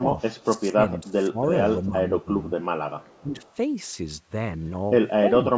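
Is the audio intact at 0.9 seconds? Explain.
No. From 0.43 to 1.39 s the talker's level sinks, in total about seven tenths of a second of suppression, with the deepest dip roughly 20 dB. This is speech suppressed in double talk, likely caused by an echo canceller that, with both ends active, could not separate the near talker from the loudspeaker echo and attenuated everything. The result is a voice that ducks instead of holding steady.

Within that span, from 0.93 to 0.98 s, a faint echo leak appears: a copy of earlier audio returning about 435 ms late and sitting roughly 35 dB under the speech. It is most likely residual loudspeaker pickup that the canceller failed to remove and that was sent back. It is heard as a brief ghost under the suppressed voice.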